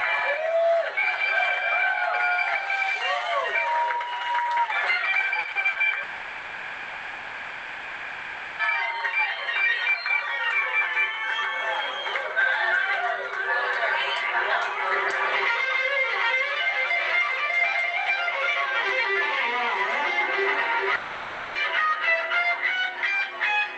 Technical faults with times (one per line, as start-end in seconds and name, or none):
5.39-5.78 short concealed packet loss
6.03-8.62 long network dropout
20.95-21.58 long network dropout